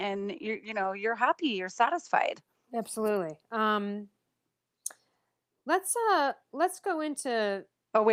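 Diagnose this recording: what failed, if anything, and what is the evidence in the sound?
No fault found in the recording.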